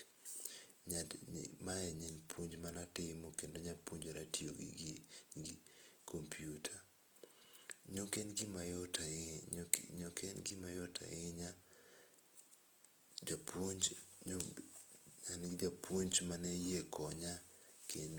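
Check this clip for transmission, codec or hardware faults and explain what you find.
One codec fault runs through the whole clip: Opus compression. With bits this scarce, the encoder's music (CELT) mode keeps each band's energy but refills the detail with folded or noise-like content. The speech therefore sounds rough and grainy, with little swirling. That graininess, and not MP3-style warbling, is what sets it apart. Content still reaches about 20.2 kHz, full bandwidth even at about 24 kbps, which fits likely Opus encoding.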